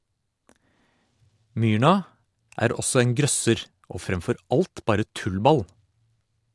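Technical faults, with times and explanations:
No technical faults can be heard in this recording.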